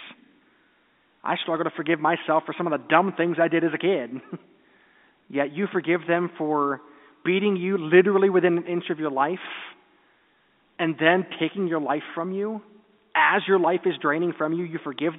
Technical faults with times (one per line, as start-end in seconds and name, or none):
1.54-1.62 bit errors on a digital phone line